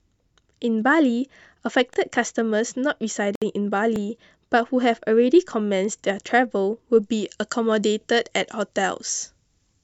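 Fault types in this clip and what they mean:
overlapping chunks: Brief stutters or clicks recur at 1.94, 3.96, 5.99 and 8.01 s, each replaying a 25 ms scrap of speech. The audio was handled in 2-second chunks, and each chunk began 25 ms before the previous one ended, so that overlap plays twice at every join.
gap at a join of encoded pieces: At 3.35 s the speech drops into a 63 ms gap with smeared edges, then resumes exactly where it stopped. Separately encoded pieces were joined untrimmed, leaving each encoder's start-up delay and last-frame padding in place.
pre-emphasis left on: From 7.0 s to the end the speech turns thin, bright and hissy on sibilants, with the treble about 14 dB stronger at 10 kHz than at 1 kHz, which fits the FM 75 µs curve. The matching treble cut was never applied.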